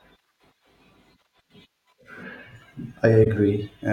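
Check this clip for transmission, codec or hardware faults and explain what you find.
One codec fault is present: a corrupt frame concealed, from 3.24 to 3.27 s in the speech. The damage lasts about 34 ms, which fits a single damaged AAC frame. The decoder caught the damage and replaced the frame itself, either muting it or rebuilding it from the previous good spectrum with scrambled signs. On a waveform it shows as a short tapered notch. On a spectrogram it's a narrow, blurred column of faded energy.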